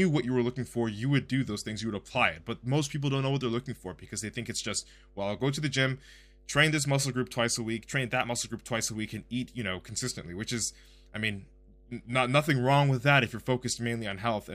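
From the first moment to the last, a steady mains hum sits under the speech at 50 Hz with a few low harmonics, roughly 30 dB below the talker. Power-line current is leaking into the signal, as happens with a ground loop or a transformer near the cabling. Unlike rumble or handling noise, the tone holds one fixed pitch and never shifts or swells, and it continues unchanged through the pauses between phrases.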